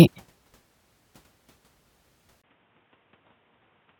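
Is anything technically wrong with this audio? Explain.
Yes. At 2.42 s, after a 20 ms gap, the speech turns dull and noticeably quieter, with nothing above 3.8 kHz and some new background noise. That's likely the input switched to a poorer device.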